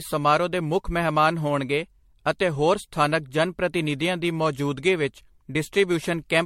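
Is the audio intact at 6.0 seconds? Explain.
No, at 6.0 s the speech still carries the generation loss heard across the whole clip: a swirly, hollow, smeared quality with blurred attacks and nothing above 16.5 kHz. It's likely from MP3 being decoded and re-encoded around seven times near 68 kbit/s, each pass piling up fresh noise and spectral holes.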